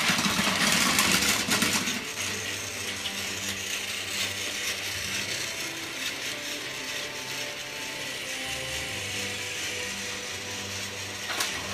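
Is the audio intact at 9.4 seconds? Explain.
Yes, the audio is intact at 9.4 seconds, with no dropout, click, distortion or other fault audible at that moment.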